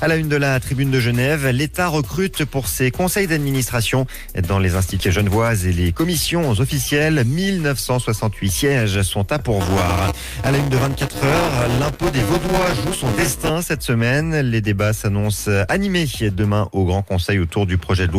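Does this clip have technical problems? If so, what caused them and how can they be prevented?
Yes. At 5.0 s a skip ahead drops roughly 0.7 s of audio with no fill. Give the jitter buffer more headroom so late bursts aren't discarded.

From 5.21 to 7.20 s, jitter buffer speed-up trims about 150 ms of pitch periods, running 107% fast at unchanged pitch; harmonics stay level while the spectrogram's events compress slightly. Limit catch-up to gentler, slower time compression.

From 9.61 to 13.50 s, buffer tearing splices roughly 15 ms-old audio into each period, creating a 200 Hz buzz. That rate fits a 5 ms period, and vertical spectrogram striations and periodic waveform discontinuities appear. Keep the writer thread safely ahead of the hardware read pointer.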